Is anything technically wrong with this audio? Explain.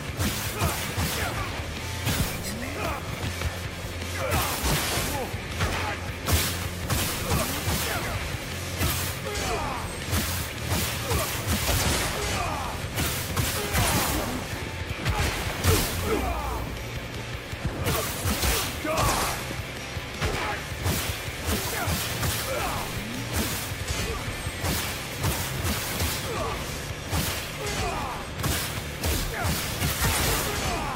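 No, no technical faults here.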